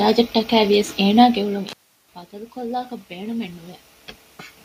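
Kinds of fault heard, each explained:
Intermittent contact: a loose plug or cable briefly losing its connection. Right after "ވިޔަސް އޭނާގެ އުޅުން", at about 1.68 s, the speech drops out with a crackle as the contact breaks, and there's just faint hiss while the line is open. The signal is gone for about 0.36 s and comes back with another crackle around 2.13 s. That abrupt, crackly gap is the giveaway for a physical connection problem.
Automatic gain rising: the automatic gain control decided the input had gotten too quiet and slowly turned itself up. Here the incoming level has fallen by about 18 dB, and from about 2.3 s to 3.67 s the gain creeps up by about 5 dB. You hear the voice and the room background swell together over more than a second, which is the control loop catching up.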